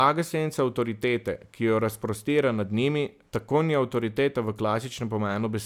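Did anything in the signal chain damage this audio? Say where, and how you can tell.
No, nothing in the signal chain damaged this speech.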